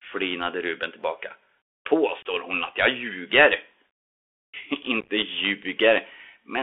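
Throughout, the speech carries the Bluetooth CVSD headset codec: a one-bit slope coder whose adaptive step can't keep up with fast, loud high content, so sibilants turn scratchy over a grainy hiss, consistent with a 64 kbps CVSD link. A spectrogram shows energy confined to roughly 300 Hz to 3.4 kHz, with nothing above.

From 2.22 to 2.25 s, just before "hon att jag ljuger", there is unconcealed Bluetooth headset packet loss: a 26 ms hole, which points to about seven lost packets replaced by silence. The waveform shows an abrupt, hard-edged gap, and the spectrogram a narrow vertical blank stripe.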